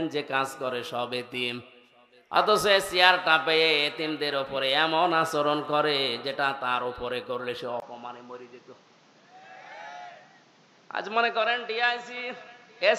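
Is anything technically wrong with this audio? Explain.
Yes. From 7.8 s to the end, the input likely switched to a poorer device: after a 20 ms gap, nothing passes above 7.5 kHz, the level drops about 5 dB, and a new noise floor appears about 30 dB down. That changed noise sets it apart from a plain low-pass filter.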